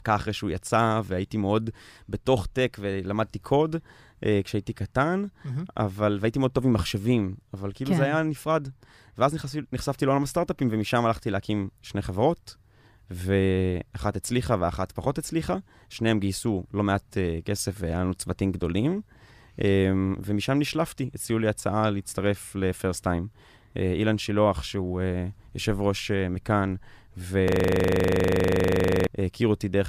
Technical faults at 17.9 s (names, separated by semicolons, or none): none